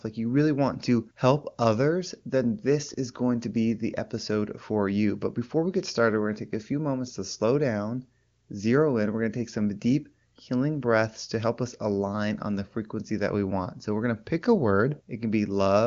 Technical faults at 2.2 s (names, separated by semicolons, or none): none